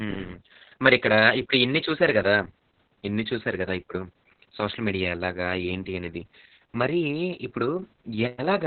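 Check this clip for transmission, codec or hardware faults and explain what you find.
One codec fault runs through the whole clip.

Opus voice compression, throughout: the speech passes through Opus's SILK linear-prediction coder in narrowband mode, cutting off everything above about 4.5 kHz and coding the excitation very coarsely, as fits a bitrate near 6 kbps. The speech sounds heavily muffled, hoarse and slightly robotic.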